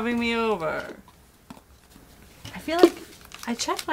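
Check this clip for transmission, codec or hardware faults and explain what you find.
One fault stands out: a sudden gain jump. From 0.8 s to 1.9 s the level drops by about 4 dB, likely because a digital gain change was applied without a ramp. Sound and background noise fall and recover together. The waveform envelope steps abruptly at both edges, and the spectrogram darkens evenly across all frequencies.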